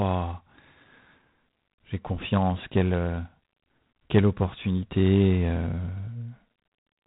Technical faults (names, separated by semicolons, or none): G.726 ADPCM